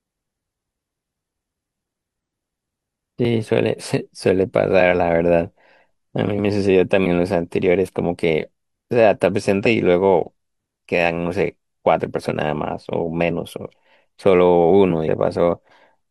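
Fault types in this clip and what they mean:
Damaged data in a compressed stream: the decoder hits corrupted bytes, misreads those frames and has to resync on the next valid header, so the speech briefly breaks up. This happens at 2.20 s, and for roughly 50 ms each at 7.02 to 7.07 s, 9.62 to 9.67 s, 12.27 to 12.32 s and 15.04 to 15.08 s.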